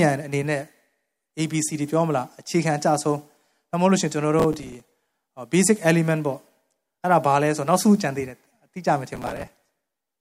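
Speech with processor overload crackle from 4.40 to 5.13 s and 9.15 to 10.07 s: dozens of missed deadlines on buffers of around 5 ms replay stale audio, giving gritty tearing rather than clean silent dropouts.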